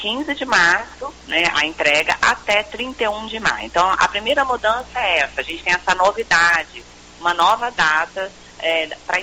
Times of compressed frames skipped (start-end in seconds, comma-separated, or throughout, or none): none